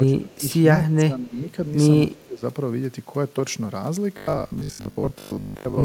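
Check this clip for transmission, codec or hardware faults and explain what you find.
Three kinds of fault are audible: speech suppressed in double talk, an echo leak, and robotic sound from repeated short buffers.

Speech suppressed in double talk occurs at 0.05 to 0.43 s, 0.85 to 1.49 s and 2.06 to 2.43 s. The speech dips by about 15 to 20 dB at its deepest. The likely cause is an echo canceller that could not tell this side's talker from loudspeaker echo while both were active, so it attenuated both.

An echo leak appears at 0.31 to 0.35 s and 2.16 to 2.23 s as brief scraps of a delayed copy of the voice, roughly 221 ms late and about 35 dB below the speech. This is likely residual loudspeaker pickup that the far side's echo canceller failed to remove and sent back.

Robotic sound from repeated short buffers runs from 4.17 to 5.83 s. The audio becomes a rigid, metallic 50 Hz buzz that follows the speech only roughly, with most of the material repeated rather than new. 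The likely cause is late-arriving audio concealed by looping the last 20 ms.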